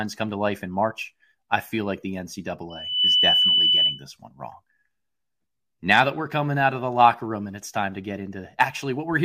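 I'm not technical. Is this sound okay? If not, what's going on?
No. The microphone picked up its own loudspeaker and the loop fed on itself, causing loudspeaker feedback squeal: just after "I feel like the", from 2.7 to 4.0 s, a piercing 3 kHz tone swells within a fraction of a second and rises above the speech.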